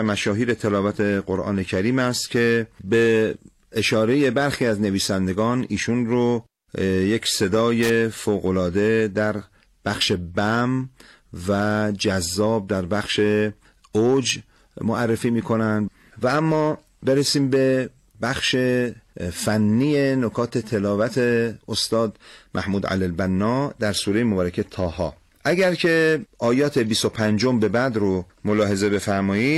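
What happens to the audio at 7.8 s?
A brief loose connector crackle from 7.83 to 7.90 s: a dirty contact rapidly breaking the signal, heard as scratchy crackle, showing as jagged dropouts and broadband vertical streaks.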